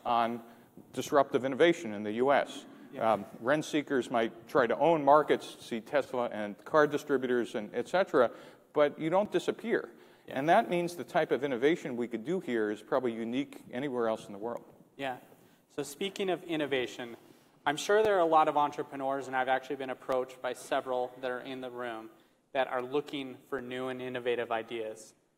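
Blocks of digital silence at 9.25, 18.05, 20.12 and 23.58 s: 2.7 to 5 ms dropouts to silence, each heard as a brief tick or dip.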